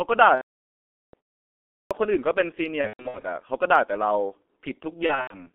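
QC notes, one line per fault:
Throughout, G.723.1 codec: the speech is squeezed into a narrow telephone band of roughly 250 Hz to 3.5 kHz at about 6.3 kbit/s, and the damage is heavy. Nothing up top survives, and the slow-moving voice model leaves it muffled and hoarse, with smeared consonants.
0.35 to 1.14 s, 2.81 to 3.26 s and 5.06 to 5.47 s, VoIP packet loss concealed by the speech codec: the first gap is one solid stretch of nearly 0.8 s, so the decoder briefly stretches its last pitch and filter into a buzzy, fading tone, then mutes from the third lost frame in a row. The later two are scattered losses (longest runs 120 ms and 90 ms), heard as brief buzzy dropouts with weak, wobbly speech just after.
1.85 s, clipped start after a pause: after roughly 0.7 s of silence the output seems to need a moment to wake up, and about 57 ms of the onset goes missing. The sound jumps in abruptly without its first bit.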